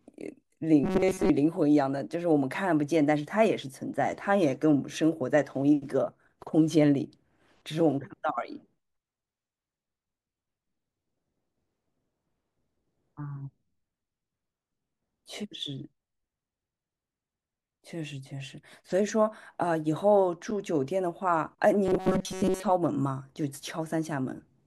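Robotic sound from repeated short buffers appears from 0.84 to 1.30 s and again from 21.86 to 22.63 s. Both times the speech collapses into a rigid metallic buzz at 188 Hz that still loosely follows the talking. The likely cause is audio arriving too slowly, so the playback keeps looping a fragment of about 5.3 ms for much of each stretch, skipping the real sound and imposing that fixed pitch.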